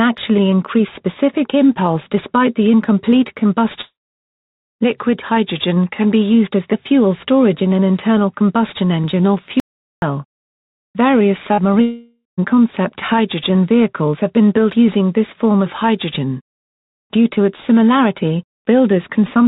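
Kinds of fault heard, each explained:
Long network dropout: Audio likely stopped arriving for a long stretch, so the receiver stretched the last sound into a fading buzz and then went quiet. This happens at 3.81 to 4.24 s, about 0.3 s of it silent, and again at 11.82 to 12.39 s, where the sound returns with a section missing.
Audio dropout to silence: The input feeding the recorder was likely lost, perhaps through a dropped link or a stray mute, and silence was written in its place. From 9.60 to 10.02 s the sound cuts to dead silence, with no room tone, then resumes with that span gone.
Short concealed packet loss: A few tens of milliseconds of the call reached the decoder too late, and the receiver covered the hole by extending the previous sound before blending back. At 11.54 to 11.60 s this is heard as a brief smear lasting about 31 ms, just before the second long dropout.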